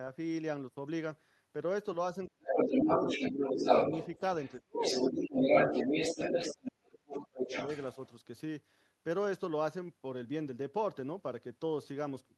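From 2.28 to 3.64 s the speech is suppressed in double talk: over roughly a second of that span the talker's voice sinks by about 30 dB, likely because the echo canceller turned everything down while both ends spoke. From 2.47 to 4.19 s the other side's voice leaks through, a second voice sitting a little above the talker, likely loudspeaker echo the canceller failed to subtract. It returns from 4.42 to 6.7 s at a similar level, and inside that stretch, from 4.65 to 5.35 s, the talker is pushed down again by about 35 dB for a brief moment. From 6.09 to 7.55 s the deepest suppression follows, about 40 dB across roughly a second. A final leak from 7.11 to 8.09 s is quieter than the talker. The two faults differ in direction: suppression takes the main voice away, leaving holes and dull fragments, while leakage adds a foreign voice on top of the audio.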